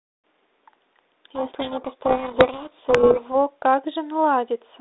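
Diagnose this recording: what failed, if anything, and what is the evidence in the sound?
The failure is at the codec stage: a codec payload misread. From 1.35 to 3.36 s the speech sinks under harsh, rasping distortion. The 32 kbit/s G.726 decoder on the 300 Hz to 3.7 kHz line is reading each code word's bits in the wrong order, so valid-looking differences decode as garbage.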